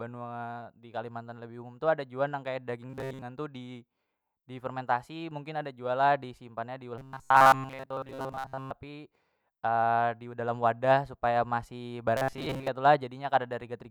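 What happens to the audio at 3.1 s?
At 3.1 s the playback is likely starved of new audio, so the software keeps looping its last short buffer of roughly 7.5 ms while the real speech is skipped. Most of the sound across 2.90 to 3.22 s is this repetition, and the loop imposes a fixed 133 Hz pitch. The result is robotic sound from repeated short buffers: the voice becomes a rigid, metallic buzz that only loosely tracks the speech.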